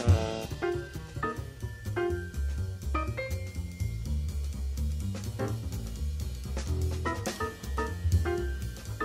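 At 0.45 s a skip ahead occurs: around 0.4 s of sound was dropped and playback jumps straight forward, with no silence, unlike a dropout that leaves a gap. From 0.55 to 1.33 s a jitter buffer speed-up trims short pitch-period pieces repeatedly, removing about a tenth of a second. The audio runs at 112% speed and sounds hurried, yet the pitch stays put, unlike a resampling error.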